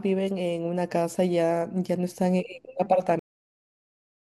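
A cut-off end at 3.19 s truncates this speech recording: the audio stops abruptly mid-sound and falls straight to digital silence, which lasts for the remaining second or so. There is no natural decay or trailing room sound, just an instant drop to silence. That points to the final buffers of the recording never being written out or played back, so the capture or export ended before the material had finished.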